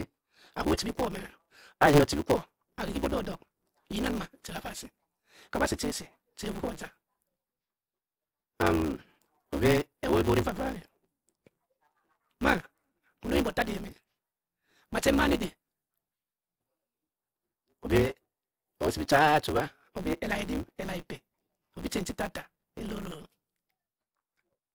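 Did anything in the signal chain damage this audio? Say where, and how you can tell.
Yes. There is a block size mismatch (truncated) at the driver or buffer stage, present throughout the speech. A steady buzz sits at 150 Hz, the block rate, and the speech runs about 1.6 times fast while its timbre stays. The writing stage hands over longer blocks than the reading stage takes, consistent with 512-sample blocks, and the tail of each is discarded. Each cut adds a discontinuity at the block rate.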